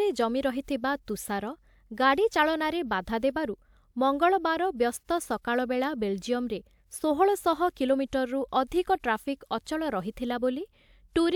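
No technical faults occur anywhere in this recording, so there is nothing to describe in time order.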